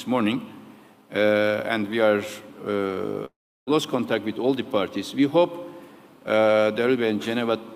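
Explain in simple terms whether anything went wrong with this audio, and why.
At 3.25 s the sound smears into a fading buzz, then drops to near silence until it resumes at 3.70 s, with a short piece skipped. This is a long network dropout, likely from audio packets that never arrived, so the player padded the gap.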